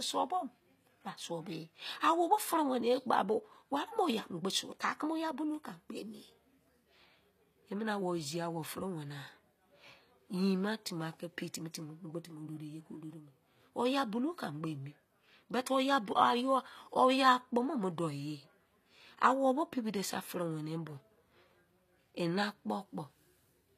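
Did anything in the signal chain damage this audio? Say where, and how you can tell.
Yes. Throughout the speech the sibilants sound gritty and metallic, with nothing above 14.9 kHz, likely HE-AAC compression at the codec stage rebuilding treble from copied lower bands, fitting roughly 24 kbps.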